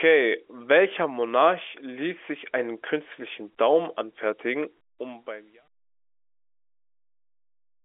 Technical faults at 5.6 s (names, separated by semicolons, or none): none